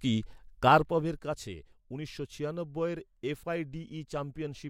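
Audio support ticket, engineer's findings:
Zipper noise, 0.6–1.24 s, ending just before "কাছে উনিশশো": ticking on the speech as gain drops about 10 dB in 3 dB steps, around seven per second. Unsmoothed gain stage, stepped in coarse increments. Waveform: staircase envelope. Spectrogram: faint broadband vertical lines at each step.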